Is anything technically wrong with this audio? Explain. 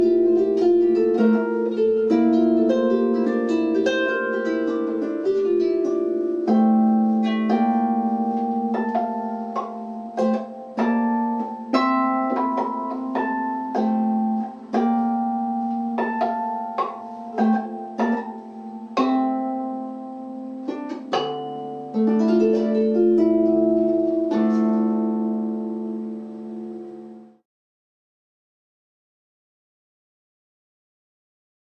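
No, nothing in this audio stood out as a technical problem on listening.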